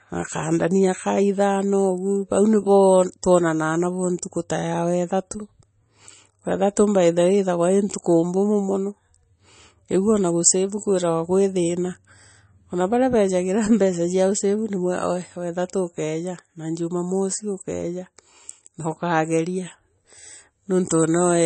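Speech runs for the whole clip with plainly audible coding damage from start to end. Nothing is heard above 8.3 kHz, so the top of the s sounds is cut off sharply. The sound has a watery, swirling quality. Quiet detail flickers in and out from moment to moment. The likely cause is MP3 compression at a low bitrate, which fits about 32 kbps. The encoder ran short of bits, dropped the treble and discarded weak frequency lines.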